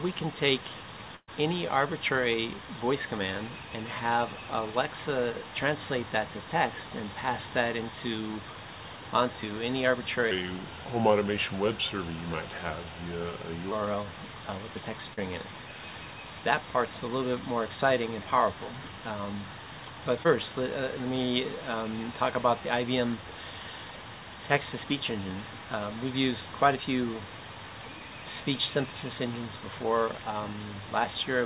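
At 1.16 s there's a burst of packet loss running to about 1.3 s. The receiver carries the last sound on for roughly 115 ms, fading it down, then drops to about 50 ms of silence. When the audio picks up again, around 120 ms of the original is simply gone.

From 10.31 to 13.72 s a section plays at the wrong speed, about 0.84 times normal. Pitch sinks by roughly three semitones and everything drags noticeably, then snaps back. The likely cause is that stretch being clocked against the wrong sample rate somewhere in playback or editing.

Two short concealed packet losses follow, at 15.14–15.19 s and 20.23–20.27 s. The decoder papers over about 35 ms and then about 15 ms by extending the preceding sound, so each comes across as a quick smear or wobble rather than a clean gap. Through all of this the call path's band-limiting is audible, with nothing above 4 kHz, which fits G.711 mu-law.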